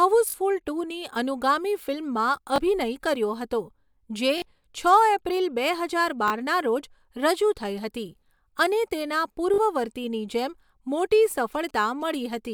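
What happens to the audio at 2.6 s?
A repeated buffer occurs from 2.56 to 2.58 s. New audio arrived late, so the device played the previous 20 ms block once more. The hard join makes a brief click-like stutter in the speech, and roughly 20 ms of audio is lost.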